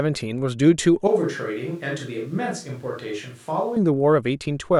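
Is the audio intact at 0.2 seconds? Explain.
Yes, the speech at 0.2 s plays through intact, with no dropout, click, distortion or other fault at that moment.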